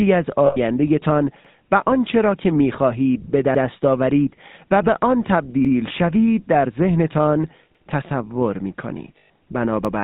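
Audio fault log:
throughout GSM full-rate codec: Speech has a buzzy, gravelly roughness and nothing above 4 kHz, which fits 13 kbps full-rate GSM. The vocal-tract model driven by sparse, regular pulses gives a constant grit, unlike plain band-limiting, which would sound dull but clean.
0.46–0.57 s and 9.18–9.30 s lost GSM frames: The sound is held as a rough, metallic ring that lasts about 100 ms and 120 ms, which points to five and six missing 20 ms frames. The decoder repeats the last good frame's settings, so nothing drops to a silent gap and the ring replaces what was lost.
1.45, 3.55, 5.65, 7.75 and 9.85 s overlapping chunks: A 100 ms stutter recurs every 2.1 s. Each 2.0 s chunk begins 100 ms before the previous one ends, so that piece plays twice at every join. The strict spacing and the cleanly repeated sound distinguish it from the metallic hold of frame loss.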